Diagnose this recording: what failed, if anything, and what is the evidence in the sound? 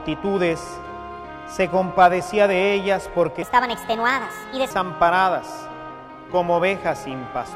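A section at the wrong speed runs from 3.42 to 4.70 s. The sound there plays 1.37 times too fast, so it is hurried and raised about five semitones. This likely happened at playback or editing, where that stretch was clocked at the wrong rate.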